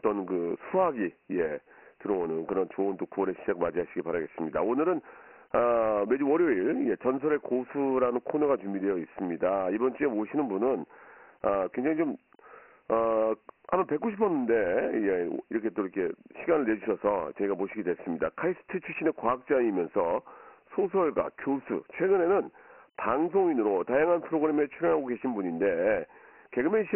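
From start to finish the speech carries Dialogic VOX ADPCM damage, the 4-bit adaptive differential coding used for phone menus and voicemail. The 24 kbps rate fits 6,000 samples a second, so nothing survives above 3.1 kHz, inside a line band running from 250 Hz upward. The coarse 4-bit steps leave heavy codec damage: a gritty hiss rides on the speech and tracks its loudness, with a dull top end.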